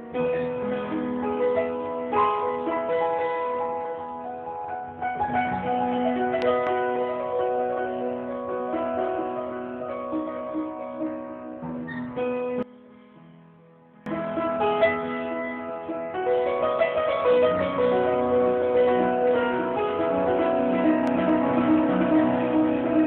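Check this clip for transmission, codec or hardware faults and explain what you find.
Two kinds of fault are present: a pair of loud pops that occurs twice, and a short stretch where one channel is inverted.

From 6.42 to 6.69 s, and again from 21.08 to 21.31 s, a loud pop occurs. Each event is two sharp pops in quick succession, peaking roughly 10 dB above the sound. The cause is likely a sudden voltage step, such as a switch or driver glitch, that enters the signal path. The following circuits shape it into a thump. The audio continues underneath.

From 12.63 to 14.06 s, one channel is inverted. The level drops by about 21 dB. The likely cause is reversed polarity on one stereo side. When the two channels are summed, their shared content cancels. Only the difference between them survives. The result is a faint remnant of the sound. It returns to full level after 14.06 s.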